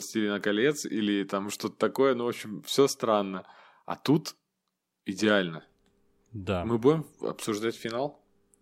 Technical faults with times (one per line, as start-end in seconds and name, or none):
none